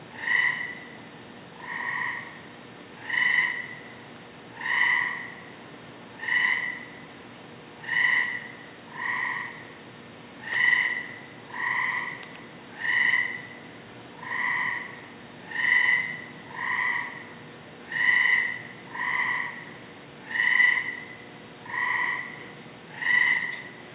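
No technical faults are audible.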